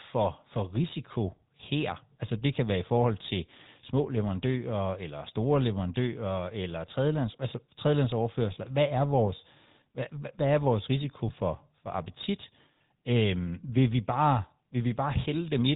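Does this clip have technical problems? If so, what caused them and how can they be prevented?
Yes. Throughout the clip the speech carries GSM full-rate codec damage: a buzzy, gravelly roughness with nothing above 4 kHz, consistent with the 13 kbps full-rate mode. That codec models the vocal tract and excites it with sparse regular pulses, discarding fine detail. To prevent it, record or transmit through a wideband path rather than a legacy GSM channel.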